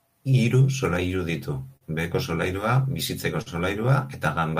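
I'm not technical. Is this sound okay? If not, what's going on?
No. There is clock drift between sender and receiver. The device that recorded and sent this speech keeps time a few percent slower than the device playing it back. Think of two clocks that slowly disagree. The playback side keeps running low on sound to play. So it has to patch things up as it goes. You hear this as small, uneven timing hiccups that recur through the whole clip.

Those patches are repeated timing corrections. They run from about 0.06 s to 4.51 s. To keep up with the slow sender, the receiver repeats tiny slices of sound. Together they stretch the speech to about 98% speed. That adds roughly 70 ms overall. Each repeat is very small. You may notice only a slightly unsteady pace, as if the talking drags now and then.

Twice, the wait was too long, and there was a short stall from a late packet. Sound travels in small chunks, and one chunk arrived late. 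The player ran out and held the last sound until it came. This happens from 1.77 to 1.84 s and from 3.42 to 3.49 s. Each hold lasts about 45 ms. Nothing is lost. But a sound lingers a moment too long, maybe with a faint buzz.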